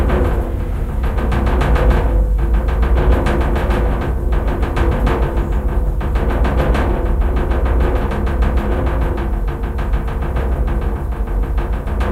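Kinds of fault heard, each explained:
Nothing here to flag: the audio runs along without any technical faults turning up at any point.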